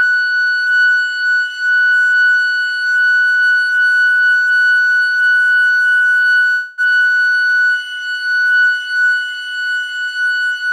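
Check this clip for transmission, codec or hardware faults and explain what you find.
Four faults are audible, three of them bunched between about 6.5 and 7.9 s in the music.

Doubled audio track, throughout: a second full-band copy was likely mixed in, probably through a slower capture path. It trails the original by roughly 200 ms at about 5 dB quieter, with no decay or room colour, so every attack sounds twice, like a dry slapback.

Call audio freeze, 6.51 to 6.81 s: packets were held up and the jitter buffer likely ran dry, so the receiver extended the last sound for about 264 ms as a fading buzz. When audio resumes it continues from where it stopped, with nothing lost.

Skip ahead, 6.90 to 6.94 s: with later packets already queued, roughly 150 ms of audio was dropped. Playback jumps forward almost seamlessly, with only a brief 13 ms fill, and a short piece of the music simply vanishes.

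Jitter buffer slow-down, 6.98 to 7.89 s: the buffer rebuilt its reserve by repeating single pitch periods again and again, adding 152 ms. The music plays at about 84% speed with unchanged pitch, sounding dragged.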